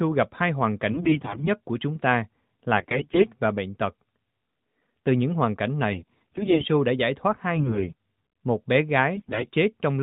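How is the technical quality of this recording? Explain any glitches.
The recording is damaged by five short bursts of AMR bit errors, heard through narrowband mobile-codec audio whose light coding colour fits AMR-NB at around 12.2 kbps.

AMR bit errors: On a weak link, the lightly protected bits in each 20 ms frame arrived corrupted (from roughly a tenth to a fifth of them) while the frames still passed their checksum. The decoder then placed its excitation pulses wrongly and misread the fine pitch, gain and spectral values. Pitch and level hold roughly steady, but the speech turns hoarse, scratchy and gargly. This happens at 0.92–1.49 s after "gặp hai hoàn" and before "của chúng ta", at 2.78–3.26 s just before "và bệnh tật", at 5.92–6.67 s, at 7.56–7.94 s right after "đã giải thoát", and at 9.16–9.46 s.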